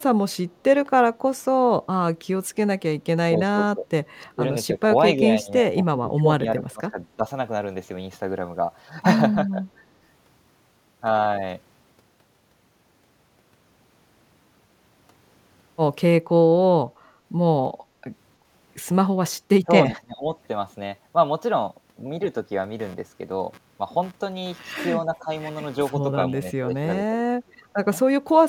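From 3.49 to 3.87 s the speech keeps ducking out, again at 4.24 to 4.43 s, 4.74 to 4.82 s and 5.17 to 7.24 s, then 9.51 to 9.63 s and 19.64 to 20.25 s. That's speech suppressed in double talk. The echo canceller likely mistook the overlap with the far side for echo and pulled the level down, by about 10 to 20 dB at the worst.

From 22.79 s to the end there's computer activity noise, a buzzy chatter pulsing at around 150 Hz, roughly 25 dB under the speech. The machine's load shifts are leaking in through the audio ground. More suppression dips land at 25.03 to 25.29 s and 26.43 to 27.66 s, the last one the deepest at about 25 dB.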